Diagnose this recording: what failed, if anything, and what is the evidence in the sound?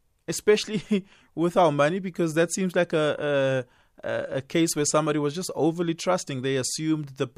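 No fault detected here.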